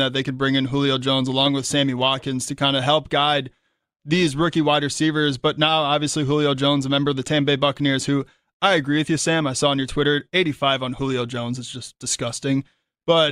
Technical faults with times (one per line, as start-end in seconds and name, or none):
none